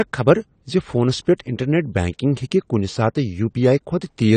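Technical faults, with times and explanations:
Throughout: AAC compression, likely from a low-bitrate AAC-LC encode, with the dull top end and smeared, fizzy sibilants pointing to around 32 kbps. The encoder drops high frequencies and coarsely quantises the rest, so the speech loses clarity and gains a warbling texture.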